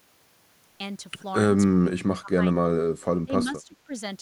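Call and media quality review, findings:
Speech suppressed in double talk, three events. 1.72–2.41 s: speech level ducks hard, deepest around 30 dB, affecting roughly half a second. 2.63–2.77 s: brief dip near 20 dB. 3.25–3.91 s: shallower drop, about 15 dB, spread over roughly 0.4 s. Likely cause: echo canceller failing to separate near-end talker from loudspeaker echo during overlap, attenuating both.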